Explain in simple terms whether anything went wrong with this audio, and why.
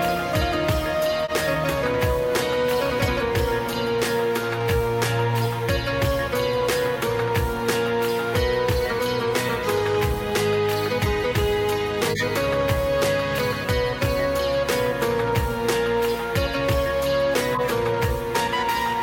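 Short glitches at 1.24–1.32, 12.11–12.24, 14.48–14.52 and 17.54–17.69 s come from corrupt frames being decoded. Damaged data was played anyway, causing brief chirps or noise bursts.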